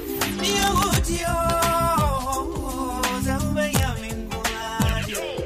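Integer overflow hits at 0.22–0.97 s, 1.50–2.01 s, 3.04 s, 3.75–3.83 s and 4.82–4.89 s. Peaks pushed about 1 to 2 dB past the integer limit wrap to the opposite sign instead of being held there, so you get harsh, violent cracks, far nastier than ordinary clipping.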